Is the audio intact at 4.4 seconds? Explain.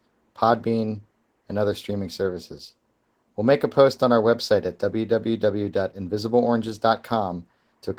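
No. At 4.4 seconds the speech sounds hoarse and slightly robotic, and this Opus voice compression damage runs through the whole clip. The sound fits Opus in hybrid mode at a low rate, around 16 kbps: linear prediction codes the band below 8 kHz with a coarsely quantised excitation, and a thin transform layer fills in the top of the band. Each 20 ms frame gets too few bits.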